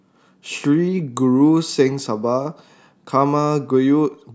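No technical faults are audible.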